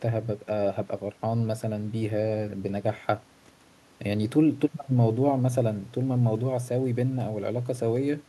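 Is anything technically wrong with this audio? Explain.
No, nothing in this speech recording points to a technical fault; the signal holds steady throughout, with no interruptions, distortion or level problems to be heard.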